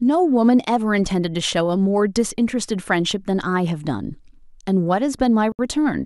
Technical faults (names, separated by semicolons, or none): Bluetooth stall